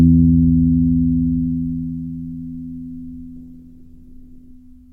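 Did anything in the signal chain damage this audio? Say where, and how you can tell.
Yes. The damage is a call bitrate drop at the codec stage, starting at 3.39 s and lasting until 4.61 s. The everyday sound suddenly loses its top end and turns coarse and watery for about 1.16 s, then clears. That fits the call's bandwidth estimate collapsing and the encoder being forced from around 128 kbps down to about 15 kbps. At that rate it quantises coarsely and discards high frequencies until the bitrate recovers.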